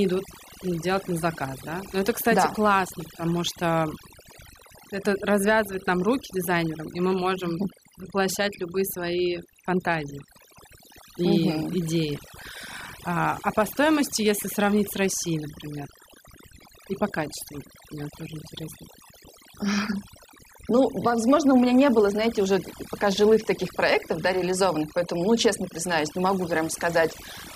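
From start to finish, the speech carries overdone noise removal. A noise reducer was set too hard. It cuts individual frequency bands whenever they sit near its noise estimate, taking quiet speech detail too. The background drops and breaks up into twinkling specks.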